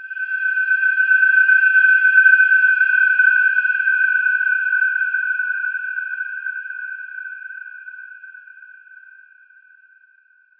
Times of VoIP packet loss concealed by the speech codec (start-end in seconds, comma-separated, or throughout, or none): none